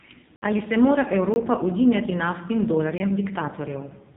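Throughout, AMR narrowband mobile codec damage is heavy: nothing passes above 3.8 kHz, a flat ceiling on the spectrogram, and the speech sounds buzzy and synthetic, which fits a bitrate near 6 kbps. Blocks of digital silence appear at 0.36–0.42 s (60 ms), 1.34–1.36 s between "se mora" and "udinjati naftnim", and 2.98–3.00 s after "udinjati naftnim". Samples were zeroed, so the waveform drops to a flat line with abrupt edges, heard as short holes.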